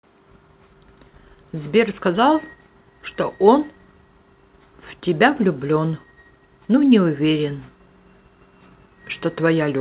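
No technical faults can be heard in this speech clip. It has come through a WebRTC call path whose G.711 mu-law coding at 64 kbps leaves nothing above 4 kHz, giving it the narrow, telephone-like band that path normally produces.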